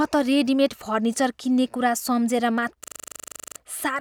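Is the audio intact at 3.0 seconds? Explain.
No. At 3.0 s the clip is inside a system hang loop running from 2.84 to 3.56 s: the system stalled while the audio hardware kept replaying one 40 ms buffer, about 18 identical times at 25 Hz. This produces a rough, rattling stutter in place of about 0.7 s of speech. Unlike a plain dropout, which goes silent, or concealment, which fades or smears, every repeat here is exactly identical.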